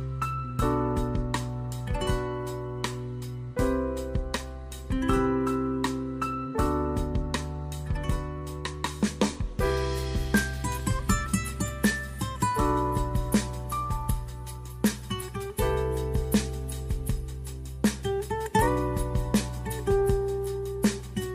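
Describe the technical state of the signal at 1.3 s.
The signal is intact at 1.3 s, with no audible fault at that moment.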